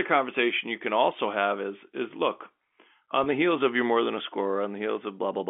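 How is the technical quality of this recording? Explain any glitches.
The recording has one audible glitch, heard over a narrow telephone band that stops short of 4 kHz, consistent with G.711 coding.

Packet loss with pitch repetition, 3.24 to 3.26 s, between "is is look on" and "the heels of your": about 20 ms of audio went missing, which fits a single lost packet. The receiver filled the hole by repeating the last pitch period. Because the gap is so short, it comes across as a brief, slightly held, buzzy sound rather than a dropout to silence.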